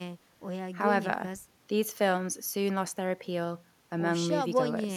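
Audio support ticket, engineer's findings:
Engineer's findings: no audio faults found in the speech recording.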